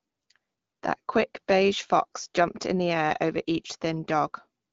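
Nothing in this speech clip stands out as a fault; it just sounds like ordinary HD Voice speech coded with AMR wideband, which holds up fine at a rate around 12.65 kbit/s.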